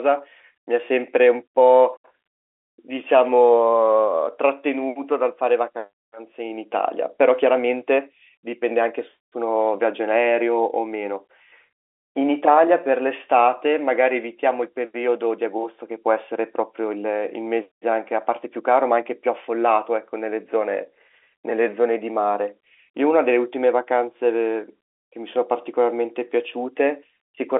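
No technical faults are audible in this speech.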